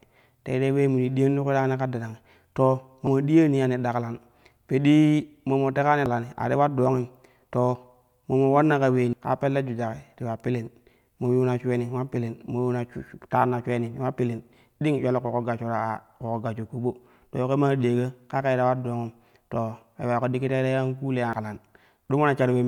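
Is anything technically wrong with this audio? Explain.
Yes, the speech skips ahead four times: at 3.07 s after "yani ka darangi to", at 6.06 s before "a ti ular", at 9.13 s before "ka pelle jujaki ti", and at 21.33 s. Each is likely a dropped buffer (overrun): roughly 100 to 150 ms goes missing with no gap, causing a jump in the sound. The waveform shows a discontinuity, and the spectrogram shows a thin vertical broadband line.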